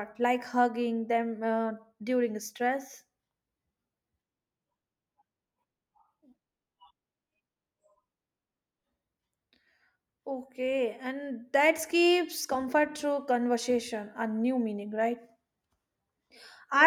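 No technical faults can be heard anywhere in the speech recording. At no point does the signal break, drop out or change character.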